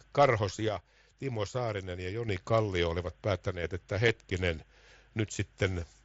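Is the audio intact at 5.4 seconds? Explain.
Yes, the speech at 5.4 seconds is intact, with no fault at that moment.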